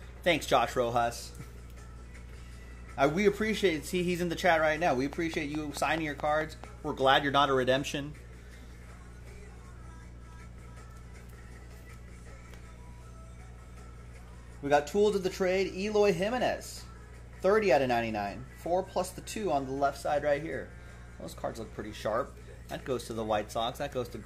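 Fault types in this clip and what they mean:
Train of clicks: A steady ticking cuts in from 4.91 to 6.65 s. About ten near-identical clicks arrive evenly, roughly 4.6 per second, standing well above the sound, some 10 dB higher. The likely cause is interference from nearby equipment or a faulty connection or power supply.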